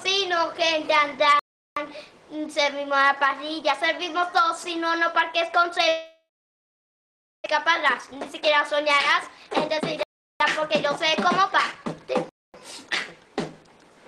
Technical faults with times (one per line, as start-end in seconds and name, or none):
1.39-1.76 block of digital silence
5.88-7.48 long network dropout
7.62-13.21 jitter buffer speed-up
10.03-10.40 block of digital silence
12.29-12.54 block of digital silence